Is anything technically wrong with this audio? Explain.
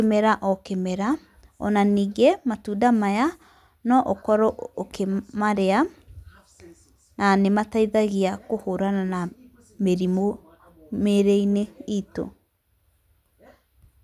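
No technical faults are audible.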